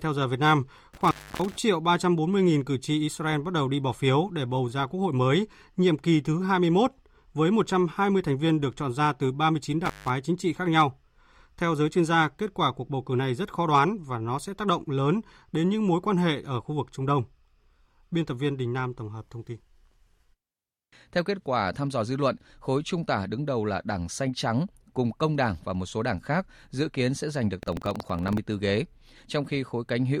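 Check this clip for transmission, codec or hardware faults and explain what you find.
Two kinds of fault turn up in the speech: a loose connection twice, and a burst of buffer tearing near the end.

Intermittent contact hits from 0.94 to 1.57 s and again from 9.85 to 10.10 s. A plug or cable briefly opens, so the sound drops out for about 286 ms and then 162 ms, with crackle on either side and faint hiss in the gap.

Buffer tearing runs from 27.59 to 28.39 s as a robotic 21.5 Hz rattle, which fits a 2048-sample buffer. Writer and reader cross inside each period, splicing in a small sliver of audio roughly a tenth of a second old.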